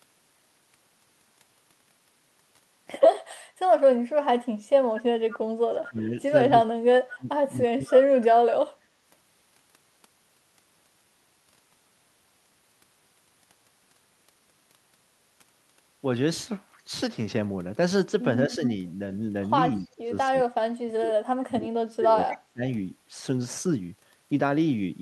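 From 4.26 to 4.52 s the speech drops away by around 30 dB, then at 5.3 to 5.38 s a faint scrap of the far voice returns 220 ms late, about 20 dB down. The speech dips again at 5.72 to 6.15 s, and at 6.49 to 8.57 s it is turned down again, up to around 35 dB down. These drops are likely speech suppressed in double talk: with both sides talking at once, the echo canceller turned the local talker down along with the echo. At 18.48 to 18.61 s there is a slight dip, overlapping a louder delayed copy, about 10 dB down, at 18.52 to 18.7 s. From 19.95 to 22.63 s the speech is pulled down by up to around 30 dB, with another brief echo at 22.3 to 22.37 s. The delayed copies point to a likely echo leak, where loudspeaker sound the canceller failed to remove was sent back to the talker.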